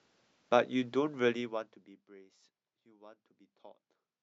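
From 1.28 to 2.05 s the speech fades down by roughly 25 dB with zipper noise: the gain drops in 1 dB jumps, about twenty a second, instead of gliding, and each jump leaves a faint click, so a fine ticking rides on the voice as it falls. On a waveform the envelope descends as a staircase; a spectrogram shows thin vertical broadband lines at each step.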